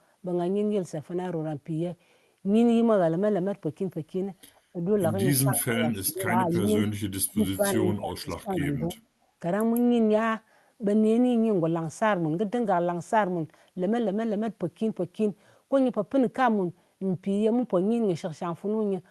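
An echo canceller likely struggling with both sides talking at once clamps down on the talker, causing speech suppressed in double talk. The speech dips briefly at 4.73 to 4.81 s and again at 5.43 to 5.83 s, by around 10 dB. Inside that second dip, at 5.56 to 5.64 s, echo leak likely appears: the far end's canceller lets part of its loudspeaker pickup return, so a faint copy of the speech trails about 233 ms behind. Further suppression follows at 6.01 to 6.25 s, a deeper cut of roughly 20 dB, and leaked echo recurs as quieter scraps at 5.93 to 5.97 s and 6.53 to 6.57 s. The suppression continues with a slight dip at 6.44 to 6.63 s and a long stretch at 7.29 to 8.97 s, where the speech is gated down in pieces by as much as about 25 dB.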